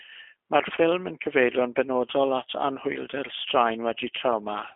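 From start to end the speech carries G.729 codec damage. Nothing sounds above 3.7 kHz, and the line band runs from 250 Hz to 3.5 kHz. Each frame is rebuilt from a filter, pitch and a few pulses. This fits an 8 kbit/s G.729A stream. It sounds plainly rough and synthetic.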